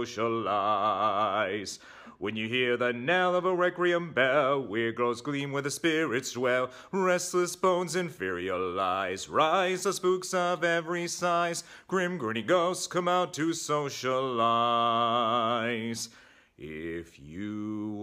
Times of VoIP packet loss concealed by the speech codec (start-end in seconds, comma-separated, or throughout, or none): none